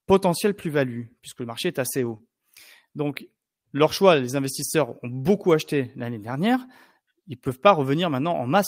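Right after "puisque le marché est", from about 1.97 to 2.15 s, you get a lost packet rebuilt from error correction. It sounds like about five separate packets went missing. There's no gap, because the decoder played the low-bitrate backup copies that ride along in each following packet. So those 100 ms come through without a gap but rougher and grainier than the speech around them.

Straight after that, from 2.17 to 2.21 s, there's a short concealed packet loss. About 20 ms of audio never arrived in time. The decoder papered over it by extending the last bit of sound for roughly 21 ms and then blending back into the real signal. Coming right on the heels of the rebuilt stretch, it adds a quick smeary wobble.

The rebuilt-packet fault turns up again after "leur choix les", from 4.39 to 4.41 s. This time it's a single packet, so only 20 ms is replaced by the coarse backup copy. You hear it as a brief patch of extra roughness rather than a dropout.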